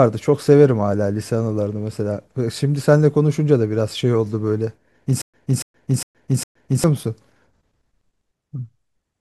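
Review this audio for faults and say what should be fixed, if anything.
From 5.22 to 6.84 s the speech breaks into a stutter with silent gaps. A 285 ms fragment plays four times, each followed by 120 ms of digital silence, on an even 406 ms cycle. Playback likely stalled and replayed its last fragment at each retry, losing the audio due in that span. Prevent it by keeping a deeper playback buffer so stalls are absorbed instead of looped.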